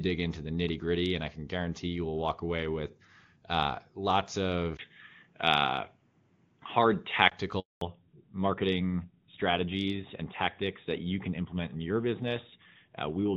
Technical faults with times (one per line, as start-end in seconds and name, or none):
4.77-7.32 input switched to a poorer device
7.59-7.81 handover gap
7.81-13.36 fallback to narrowband